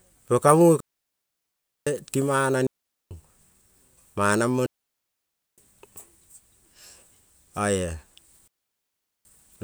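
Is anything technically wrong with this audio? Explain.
Yes. The speech cuts to clean near-silence four times, from 0.80 to 1.87 s, 2.67 to 3.11 s, 4.66 to 5.58 s and 8.48 to 9.25 s, each hole without any burst of noise around it. This is digital wireless dropout: the radio link lost too much data, so the receiver quickly faded to mute for roughly 0.4 to 1.1 s.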